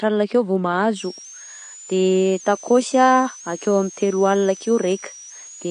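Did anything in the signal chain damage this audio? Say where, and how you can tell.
Yes. Throughout, the speech sounds dull and smeared, with nothing above 9.6 kHz; this codec damage is likely AAC compression at a low bitrate, around 32 kbps.

From 0.97 s, just after "alina akeo vô", a switching supply whistle sits between 5.4 and 7.2 kHz, about 20 dB below the speech. A power supply is bursting audibly or beating against another.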